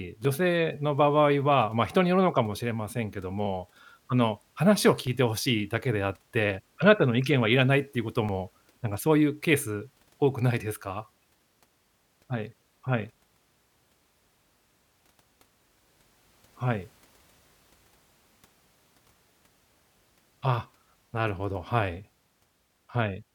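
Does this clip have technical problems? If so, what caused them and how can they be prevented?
Yes. From 0.25 s to 22.74 s the speech carries a regular click every 1.61 s, about fifteen in all. These are clock drift buffer slips, likely from two clocks differing by roughly 500 ppm, so a few dozen samples are dropped or repeated each time. A spectrogram shows evenly spaced thin vertical lines, and the waveform shows small jumps. Locking both devices to one shared clock, or using asynchronous sample-rate conversion, prevents this.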